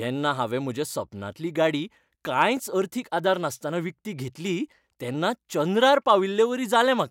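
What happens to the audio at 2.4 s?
Nothing goes wrong at 2.4 s; the speech carries on there without any audible fault.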